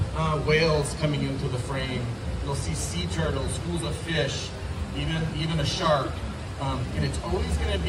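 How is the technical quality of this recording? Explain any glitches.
Nothing in the signal points to a technical fault: the level, continuity and timing hold steady throughout, with no glitches to explain.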